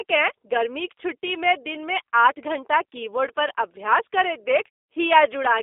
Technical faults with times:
0.00-5.62 G.729 codec

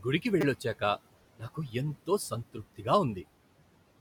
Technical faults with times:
0.00-4.00 noise suppressor artifacts
0.41-0.43 repeated buffer
1.39-1.74 speech cut by the noise suppressor

